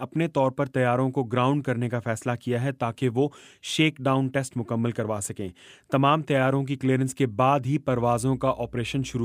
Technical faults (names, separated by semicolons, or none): mains hum